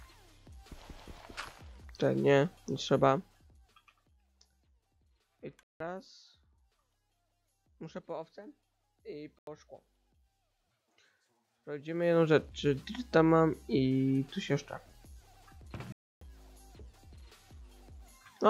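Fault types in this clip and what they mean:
zipper noise: A ticking, zipping texture rides on the sound while the level moves, first from 2.88 to 4.24 s as it falls by roughly 20 dB, then from 11.72 to 12.28 s as it rises by roughly 20 dB. The ticks arrive about 50 times a second, which shows the gain being changed in discrete jumps, probably once per buffer, with no smoothing between them, so each jump leaves its own tiny discontinuity.
block of digital silence: The sound cuts out abruptly and returns with no fade, leaving short holes at 5.63 s for 170 ms, at 9.39 s for 85 ms, and at 15.92 s for 290 ms. The first two lengths fit blocks of 8192 and 4096 samples. Zeros were output in place of the audio, either because the output buffer was not filled in time or because a calculation produced invalid values.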